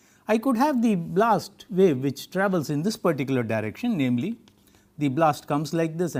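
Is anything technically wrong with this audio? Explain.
No, no technical faults are audible.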